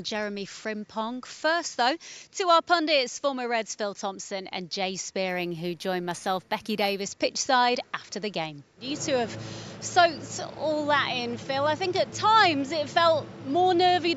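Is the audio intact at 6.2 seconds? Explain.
No, 6.2 s falls inside a stretch of imaging from linear upsampling, 5.29 to 7.01 s. The sound points to a 16 kHz to 48 kHz rate change by straight-line interpolation, which dulls the top and leaves a faint mirrored copy around 8 to 16 kHz, roughly 25 dB down, heard as a light metallic shimmer on the highs.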